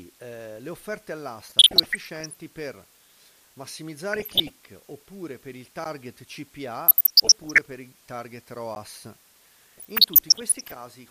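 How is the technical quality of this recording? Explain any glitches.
Technical quality is poor: a constant hiss sits under the whole thing, and the speech gets chewed up in four places plus two quick dropouts.

Low bit depth with dither runs throughout. The audio sounds like it's been reduced to about 7 bits, with dither added before rounding, so the quantisation error turns into a steady, even white hiss rather than gritty distortion. It sits only about 20 dB below the speech, so it's clearly audible the whole way through.

DAB burbling shows up four times. The first runs from 1.49 to 2.36 s, right after "eh le offerte". The second is shorter, 4.13 to 4.50 s, just before "oppure per il", and it's the roughest of the lot. The third runs from 6.88 to 7.58 s, leading into "per i target", and the last from 9.75 to 10.76 s. This is weak-reception damage: bit errors slip past the error correction into the MP2 data, so corrupted samples put short noise blips into individual sub-bands and corrupted scale factors make sub-bands jump in level for up to a frame. 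You hear watery, bubbling blips over the speech.

There are two blocks of digital silence. One is at 5.84 s and lasts about 14 ms. The other is at 8.75 s and lasts about 11 ms, which fits a 512-sample buffer. In both, the output just drops to zeros and comes back with no fade, most likely because the buffer wasn't filled in time. At these lengths each one comes across as a sharp tick or small pop rather than a noticeable gap.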